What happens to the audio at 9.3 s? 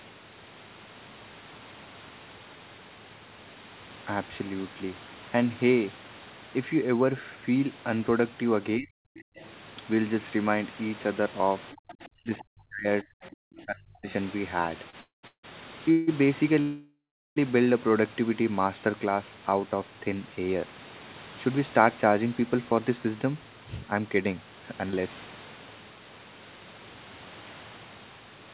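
A faint second voice surfaces from 9.18 to 9.46 s, roughly 25 dB below the main speech. The likely cause is the other side's voice leaking through: loudspeaker playback reached the microphone, and the echo canceller left a residue.

Inside that span, from 9.23 to 9.36 s, the room background drops out. It falls by about 40 dB for around 150 ms, then returns. This is background gated by the echo canceller. It sensed loudspeaker playback and clamped the microphone down hard until it released.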